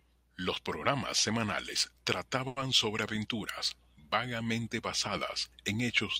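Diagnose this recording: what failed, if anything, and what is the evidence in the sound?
The failure is at the network stage: a short stall from a late packet at 2.47 to 2.59 s, just after "programas semanales". The jitter buffer ran dry, so the receiver stretched the last sound for about 90 ms, then resumed where it left off. Nothing is lost, but playback now runs 90 ms later. On a spectrogram the harmonics go flat and smeared for that stretch, with a faint buzz or dip. The waveform shows a repeating cycle.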